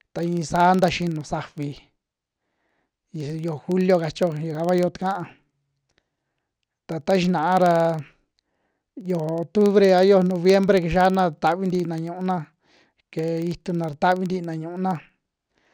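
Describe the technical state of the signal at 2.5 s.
At 2.5 s you're hearing the filter restarted on every block, and it isn't local to that moment; it runs through the whole clip. The filter drops its memory at each block boundary and starts from silence, so every block opens with a small transient. Those land about 21.5 times a second, which fits 2048-sample blocks, giving a low ticking buzz under the speech that rises and falls with its level.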